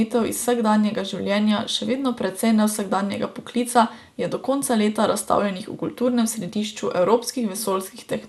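Speech throughout, and it's dull and gurgly the whole way, with nothing above about 12.2 kHz and grainy, flickering upper bands. That's most likely MP2 compression squeezed hard, which fits a rate around 80 kbps, switching off top sub-bands and coarsely quantising the rest.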